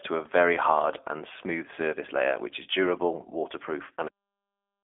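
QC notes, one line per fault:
throughout: G.729 codec, speech rebuilt from a filter, pitch predictor and sparse pulses, sounding rough and synthetic at what fits 8 kbit/s. The spectrogram shows a hard ceiling near 3.6 kHz and a 300 Hz to 3.5 kHz band.
4.08 s: cut-off end, the final buffers never played, so speech stops mid-sound. The waveform drops straight to flat digital silence with no decay until the end.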